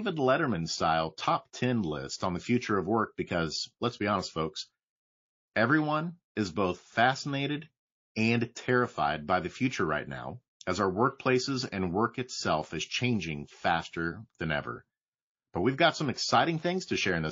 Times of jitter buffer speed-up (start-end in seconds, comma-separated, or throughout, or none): none